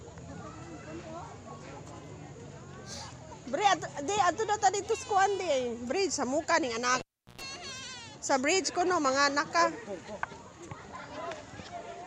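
A live cable was pulled and plugged in from 7.00 to 7.41 s: a pop, about 365 ms of near silence, 114 ms of 60 Hz mains buzz, then another pop.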